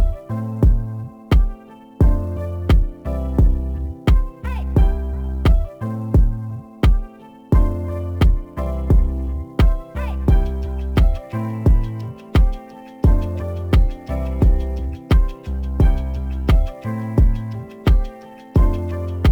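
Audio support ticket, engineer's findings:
Sample clock jitter, whole clip: fine hiss and roughness riding on loud and bright passages, gone in quiet gaps. Converter clock timing unstable, roughly 10 µs rms, so samples land early or late and the error scales with waveform slope. Error floor around 35 dB below signal. Suspect ADC/DAC clock source or PLL. Check master clock distribution and cabling.

Corrupt frame decoded, 8.23 to 8.25 s: short chirp-like blip, about 21 ms, a single frame's worth. Damaged compressed frame decoded and played anyway, with misread gains or codes dumping energy into wrong frequency bins, peaking around -30 dBFS. Suspect transport or storage bit errors upstream of decoder. Check for error concealment or frame checksum handling.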